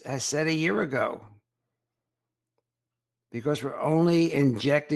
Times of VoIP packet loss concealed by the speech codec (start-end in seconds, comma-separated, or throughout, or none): none